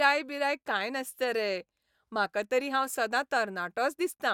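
A short bit of speech, and nothing technically wrong turns up anywhere in it.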